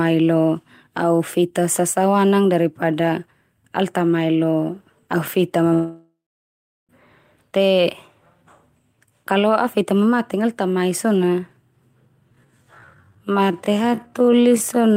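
At 5.73 s, right after "au feta", the speech cuts out in a long network dropout lasting until 6.91 s. The last sound is carried on as a fading buzz or hiss, then gives way to near-silence or a low steady noise for roughly three quarters of a second. About 1.16 s of the original speech is simply absent when the audio resumes. The likely cause is that packets stopped arriving and the receiver concealed the gap.

From 12.26 s to the end, the speech plays as a time-stretched section. It slows abruptly to about 0.55 times its original pace while the pitch stays the same. That combination points likely to software lengthening the audio by repeating short pieces, and the result drags, with syllables drawn out.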